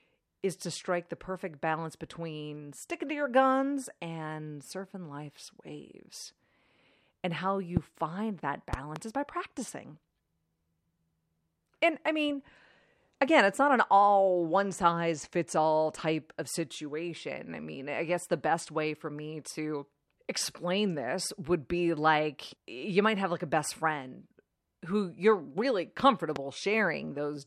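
Speech with a loud pop fault at three points. A single sharp pop spikes from 7.77 to 7.79 s, roughly 20 dB above the speech. A double pop follows between 8.73 and 8.99 s, and a single pop at 26.36 to 26.38 s, each around 10 dB above. Speech continues beneath each one. The likely cause is a voltage transient from a plug, switch, static or driver glitch. On a waveform each shows as a tall narrow spike. On a spectrogram it shows as a thin vertical stripe across all frequencies.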